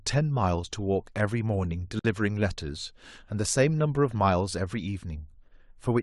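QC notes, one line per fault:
1.99–2.05 s, gap at a join of encoded pieces: a 53 ms silence cuts into the speech, from encoder delay and last-frame padding left untrimmed where separately encoded 4-second pieces meet.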